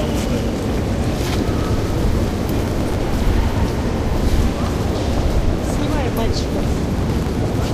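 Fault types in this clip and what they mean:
processor overload crackle: The processor misses many tiny buffer deadlines in a row and each late buffer, a millisecond or two long, is simply skipped. Two gritty crackle bursts result, 2.59 to 2.95 s and 6.89 to 7.63 s. Spectrogram: dense vertical broadband streaks; waveform: many small jagged breaks.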